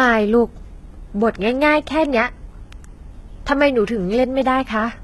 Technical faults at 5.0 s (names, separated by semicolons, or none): HE-AAC compression